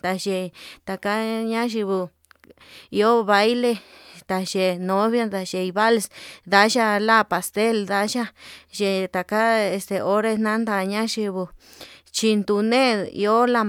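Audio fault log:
Nothing stood out on listening to the speech in this recording.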